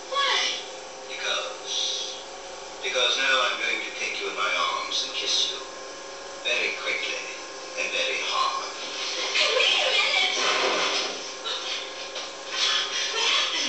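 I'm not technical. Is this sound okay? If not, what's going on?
Yes, this sound is okay, and nothing is going on with it.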